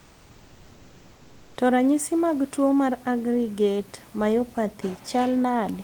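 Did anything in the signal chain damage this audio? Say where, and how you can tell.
Yes, at the codec stage: from 0.00 to 1.55 s the room background is replaced by comfort noise, likely from discontinuous transmission, where the sender pauses during silence and the receiver synthesises filler. That stretch sounds steady and featureless, about 4 dB quieter than the real room noise that follows.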